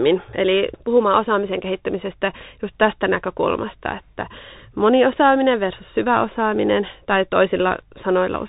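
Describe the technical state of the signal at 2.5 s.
At 2.5 s you're hearing the Bluetooth CVSD headset codec, present the whole way through. Its one-bit-per-sample coding, which fits a 64 kbps stream, cuts everything above 3.8 kHz and leaves plainly audible grainy distortion on the speech.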